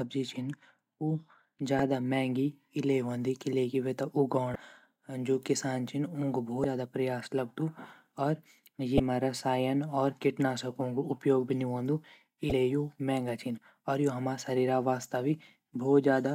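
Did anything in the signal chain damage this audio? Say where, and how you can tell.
Yes, in the codec stage. This is damaged data in a compressed stream. Brief blips occur at 1.79 s, before "महँगी इल्ले", and at 4.52–4.56 s, 6.61–6.65 s (before "ज़्यादा प्रयास लगदू"), 8.96–9.00 s and 12.49–12.52 s. Corrupt bytes make the decoder misread frames and lose sync.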